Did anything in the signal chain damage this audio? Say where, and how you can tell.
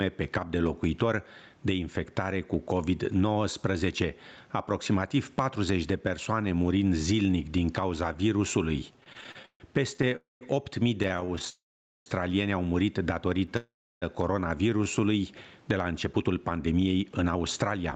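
Yes. Gain pumping runs through the whole clip. The level swing is around 15 dB. Loud and soft passages sit unnaturally close together, and the speech sounds squashed. The stage is capture. The likely cause is input gain set far too high for the microphone, with a fast limiter or compressor clamping down on each peak and releasing in the gaps.

Repeated stalls (stutter) run from 8.93 to 11.48 s. They start after "zilnic din cauza virusului" and end before "au murit". The speech keeps catching and dragging through many short holds. The longest is about 144 ms, and in total nearly half a second is filled. Nothing is lost, but the flow limps. This is the network and jitter buffer stage. Packets kept arriving late, so the buffer ran dry repeatedly, and the receiver stretched the last sound to cover each wait.

Three call audio freezes occur, at 10.16 to 10.43 s, 11.50 to 12.08 s just before "au murit", and 13.57 to 14.04 s right after "au murit". 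Each one holds the last sound briefly and then drops into silence for most of the gap. The second is the longest, at over half a second. Speech then resumes where it stopped, with nothing skipped. The likely cause is packets held up in the network until the jitter buffer emptied.

A jitter buffer slow-down follows at 14.70 to 15.01 s. The speech runs at about 87% speed while keeping the same pitch. Sounds are drawn out, and about 48 ms is added. This happens at the buffer stage, right after the freezes. The receiver is rebuilding its reserve by repeating single pitch periods many times in a row. That is why the pace slackens without any drop in pitch.

A jitter buffer speed-up covers 16.06 to 17.93 s, the end of the clip. The speech runs at about 112% speed with unchanged pitch and sounds hurried. Around a fifth of a second is trimmed out in total. This is the buffer stage again. The buffer held more audio than its target. 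The receiver cut short pitch-period slices repeatedly to bring the delay back down.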